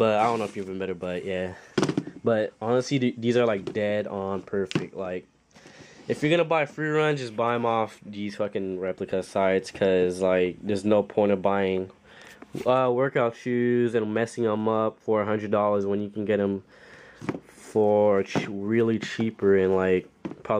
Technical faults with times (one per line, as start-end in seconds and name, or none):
none